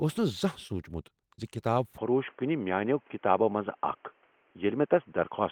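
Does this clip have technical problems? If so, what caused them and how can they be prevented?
Yes. Short concealed packet loss occurs at 0.67–0.71 s and 1.35–1.44 s. About 20 ms of audio arrived too late, so the decoder extended the preceding sound to fill each gap, heard as brief smears. Prevent it with a larger jitter buffer or a steadier network path.

From 1.98 s to the end the sound turns dull and boxy, with no gap and no level jump. The likely cause is an input switch to a poorer device. The spectrogram shows nothing above 3.3 kHz and a new noise floor roughly 35 dB down. Prevent it by locking the input device before recording.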